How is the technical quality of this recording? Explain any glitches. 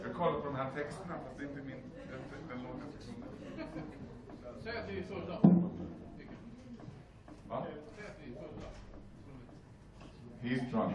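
Nothing to flag here: there are no glitches in the recording, so there's nothing to explain.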